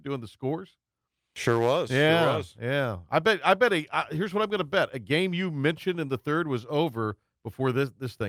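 No technical faults are audible anywhere in the recording.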